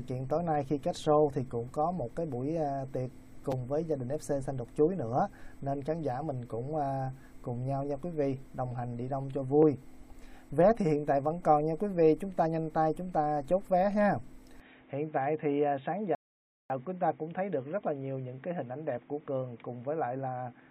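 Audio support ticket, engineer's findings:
Repeated buffer at 3.52 s. A 5.8 ms slice plays twice more with hard joins, heard as a brief click-buzz. This fits a 256-sample buffer. The output device replayed its last buffer when fresh audio arrived late. No audio lost.

Input switched to a poorer device, 14.60 s to end. The sound turns dull and boxy, with nothing above 3.8 kHz. Level drops about 5 dB. New background noise sits about 35 dB below the signal. No gap at the switch. Likely cause: capture moved to a narrower-band microphone or a headset call profile.

Rebuffering stall, 16.15 to 16.70 s. The audio cuts to silence, then resumes exactly where it stopped. 550 ms added, nothing lost. The player's download buffer ran dry, so playback halted until more data arrived.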